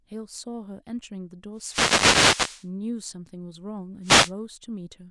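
A burst of hissing static swells over the speech from 1.55 to 2.68 s, and a shorter swish follows from 4.03 to 4.32 s. These are wireless microphone noise hits: the analogue FM radio link faded as reflected signals cancelled, letting receiver noise surge.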